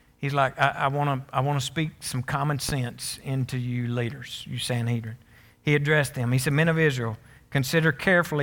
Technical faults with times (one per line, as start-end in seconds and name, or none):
2.69-2.72 loud pop